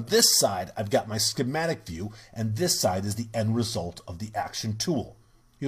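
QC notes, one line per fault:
No faults heard anywhere in this clip.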